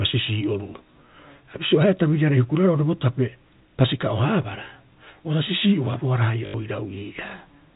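From 6.46 to 6.54 s, packet loss with last packet repeated replaces about 80 ms of the speech with one short chunk played over and over. That fits four lost 20 ms packets. The run buzzes at 50 Hz. A waveform shows identical repeating blocks, and a spectrogram shows 50 Hz striping under the 4 kHz telephone ceiling.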